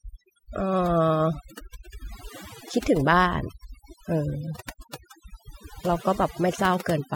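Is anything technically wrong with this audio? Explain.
Yes. The speech suffers from overdone noise removal, and it lasts the whole clip. A noise reduction stage was pushed too hard on a noisy source. It drives individual frequency bands down or off whenever they sit near its noise estimate. Quiet parts of the voice fall below that line and vanish with the noise. The background drops and breaks up into twinkling specks.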